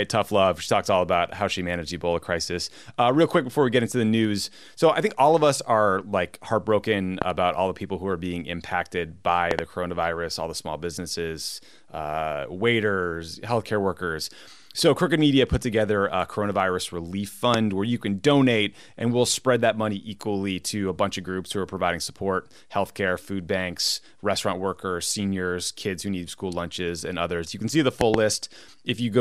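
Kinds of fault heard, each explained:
Loud pop: sharp thumps land on top of the speech, likely voltage spikes from a switch or plug. Some come singly, some in close pairs.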